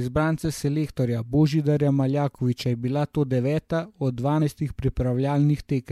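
At 4.38 to 4.42 s, the speech is interrupted by a brief glitch lasting about 40 ms. This is damaged data in a compressed stream. Part of the encoded data at that point is corrupt. The decoder cannot read the affected frames correctly. It loses its place and scans forward for the next valid frame header. While it recovers, the speech is disrupted. Clean decoding resumes at 4.42 s.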